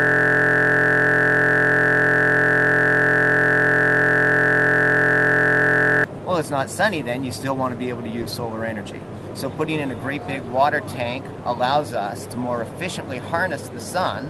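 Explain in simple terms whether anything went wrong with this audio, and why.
A system hang loop runs from the very start until about 6.04 s. It is already under way when the clip begins. The computer froze while the sound hardware kept replaying one 23.22 ms slice, which fits a 1024-sample buffer. At 43.1 repeats per second, that turns into a steady buzz.

A short concealed packet loss occurs from about 8.21 to 8.27 s. About 40 ms of the call arrived too late. The receiver covered the gap by stretching out the preceding sound before blending back in, which leaves a brief smear in the audio.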